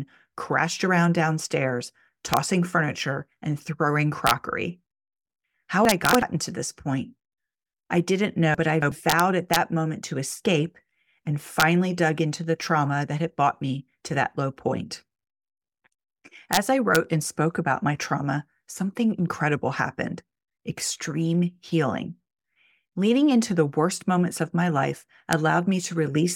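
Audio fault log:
2.34 to 2.37 s, 4.27 to 4.31 s, 6.14 s, 9.10 to 9.56 s, 11.60 to 11.62 s, 16.53 to 16.57 s, 16.95 s, 25.33 s: integer overflow. Loud peaks exceed the limit by about 0 to 2 dB and wrap to the opposite sign. They crack harshly, first after "crashed around downstairs".
5.85 to 6.22 s and 8.55 to 8.92 s: chunks out of order. A 93 ms chunk plays three chunks late. The speech jumbles briefly.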